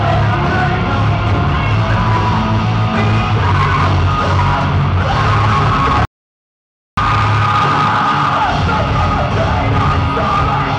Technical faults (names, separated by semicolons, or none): audio dropout to silence